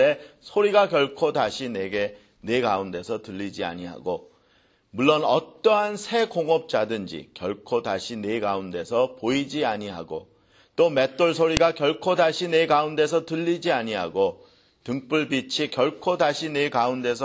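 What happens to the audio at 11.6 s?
At 11.57 s there's a sharp, loud click, a classic file header played as audio. Two WAV pieces were joined there without stripping the second one's header, so those few dozen header bytes get played as if they were samples, giving a brief snap.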